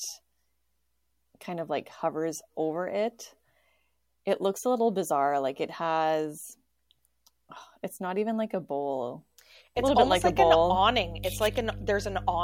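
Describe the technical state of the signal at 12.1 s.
At 12.1 s the signal carries mains hum, running from about 9.77 s, just after "even like a bowl", to the end of the clip. A ground loop or nearby transformer is leaking the 50 Hz power line into the audio as a steady low drone, sitting only about 10 dB below the speech. On a spectrogram it shows as an unbroken horizontal line at 50 Hz with low harmonics above it.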